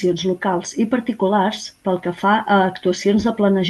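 No technical faults can be heard in the speech. It has passed through a WebRTC call path, and the top of the spectrum rolls off around 12 kHz, which fits a superwideband Opus setting.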